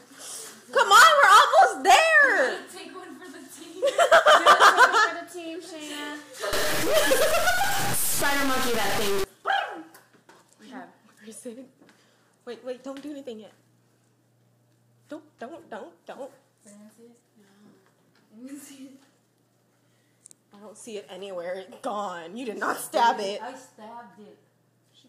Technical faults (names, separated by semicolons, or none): stuck bit